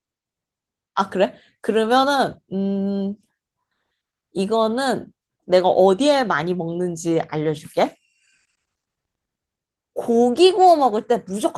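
Nothing faulty in this speech: the Opus voice coding runs in hybrid mode across the full band, leaving only light codec colouring consistent with a rate near 20 kbps.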